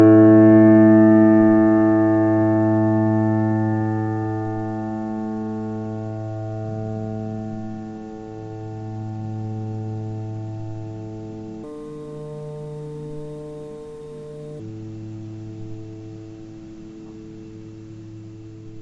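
A recording of sounds that, from 11.64 to 14.60 s, suddenly runs fast and high, about 1.38 times normal speed and roughly 5.5 semitones sharp. This is a wrong sample rate fault: the samples are played faster than they were captured, which fits 16 kHz material played at 22 kHz.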